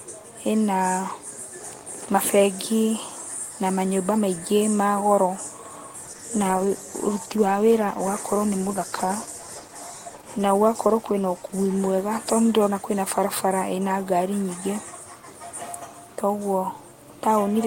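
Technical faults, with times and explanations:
6.05–13.43 s, call bitrate drop: the speech turns rough and watery, with the upper frequencies dulled, for about 5.6 s at its worst before the detail returns. The call's bandwidth estimate fell and the encoder was pushed to spend far fewer bits, which fits a fall from around 32 kbps to about 14 kbps. At that rate Opus quantises each frame coarsely and narrows the coded band until the bitrate recovers.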